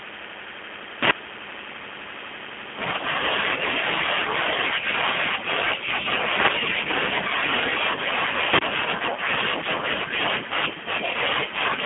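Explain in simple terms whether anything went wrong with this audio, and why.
Two things went wrong. First, the whole recording went through the G.729 codec, a low-rate phone compression system that rebuilds the speech from a simple model of the vocal tract. The damage is plainly audible: the speech sounds rough and synthetic, and nothing above about 3.6 kHz survives, giving a thin, telephone quality.

Second, from 8.53 to 8.62 s there is an uninitialised buffer: the player output a block of memory before any audio had been written into it. That leftover data comes out as a brief, harsh burst of noise. Its length of about 85 ms fits a 4096-sample block.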